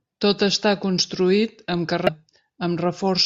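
Speech clip with damaged data in the compressed stream from 2.07 to 2.09 s: corrupted frames make the decoder lose sync, producing a brief glitch that shows as a brief vertical smear and waveform discontinuity.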